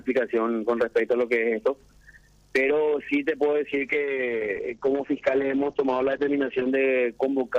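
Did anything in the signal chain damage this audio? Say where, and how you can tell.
Yes, a call bitrate drop at the codec stage from 3.73 to 6.77 s. The audio turns rough and muffled because the encoder starved of bits codes coarsely, which fits a fall from about 128 to 8 kbps. A spectrogram shows everything above 8 kHz vanishing, then returning.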